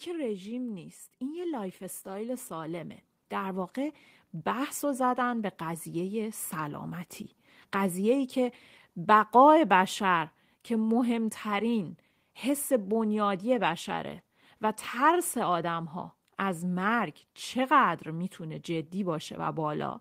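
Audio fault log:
1.19–6.97 s, automatic gain rising: the automatic gain control decided the input was too quiet and slowly turned itself up, by about 11 dB over nearly six seconds. Because it's one gain stage acting on the whole signal, the speech and the background noise swell together, so the room gets louder right along with the talker. The ramp is gradual rather than a jump, which is why it comes across as a steady creep upward.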